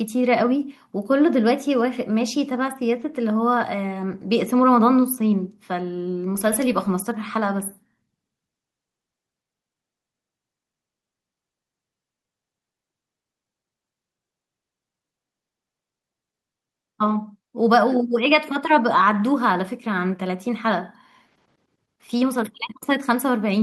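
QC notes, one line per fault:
No fault found.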